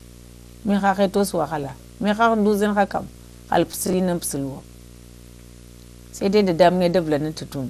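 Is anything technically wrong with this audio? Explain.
Yes. There are four problems.

A video or display buzz runs through the whole clip. A screen or its cable is coupling into the audio path. The buzz sits at 60 Hz, the picture's field rate, with a layer of hash above it. It stays roughly 25 dB below the speech. It never stops.

The whole clip also sounds dull and gurgly. The likely cause is MP2 compression at a low rate, which fits about 80 kbps. Layer II splits the sound into 32 sub-bands and shares out a tight bit budget. Upper bands get switched off and flicker back. The bands that remain are coarsely quantised. The damage is plainly audible as a granular, gurgling edge on the speech.

DAB burbling appears twice. The first is from 1.58 to 1.80 s, just after "məhəhə tusuŋ". The second is from 4.59 to 4.78 s. Weak reception let a small share of bit errors slip past error correction into the MP2 data. 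Wrong samples put short blips of noise into single sub-bands. Each burst puts burbling blips over the speech.

Processor overload crackle occurs from 3.72 to 3.94 s. The processor fell behind and missed a run of buffer deadlines. The sound points to buffers of about 10 ms, with around seven missed in a row. Each miss replayed a scrap of old audio with hard edges. Together they form a short, gritty tearing over the speech. It stops once the load passes.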